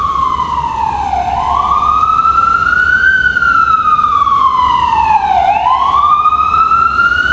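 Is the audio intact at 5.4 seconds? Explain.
No. At 5.4 seconds, as throughout the clip, gain pumping is present: the gain is likely set far too high, so a fast limiter pulls it down on each loud sound by around 5 dB. Loud and soft parts end up closer in level, and the waveform shows a flattened, squashed envelope.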